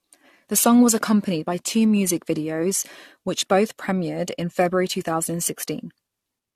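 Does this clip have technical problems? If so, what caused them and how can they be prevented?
Yes. Generation loss runs throughout: swirly, hollow speech with blurred attacks and nothing above 14 kHz, likely from around seven AAC re-encodes at about 64 kbit/s. To prevent it, edit from a lossless master and encode only once.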